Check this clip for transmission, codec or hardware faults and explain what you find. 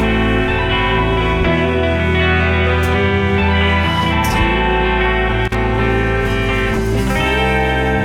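One hardware fault is present. Loose connector crackle occurs from 5.45 to 5.55 s, a burst of about a tenth of a second. A worn or dirty contact somewhere in the cable or jack path was briefly shifting, so the connection kept making and breaking. Each break chopped the music signal off and let it snap back, and any DC riding on the line turned those transitions into pops. The result is a short, irregular scratch of crackle laid over the music.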